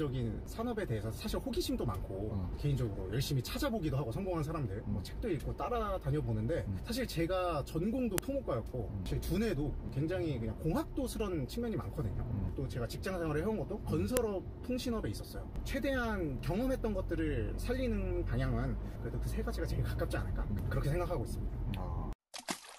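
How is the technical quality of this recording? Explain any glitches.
The recording has two sharp clicks, at 8.18 s and 14.17 s. Each is a file header played as audio. Separate WAV pieces seem to have been joined without stripping their headers. The header bytes are not sound data, but the player reads them as samples anyway. That produces a brief, loud snap lasting about a millisecond. It lands at the start of each new piece, regardless of what the sound is doing at that moment.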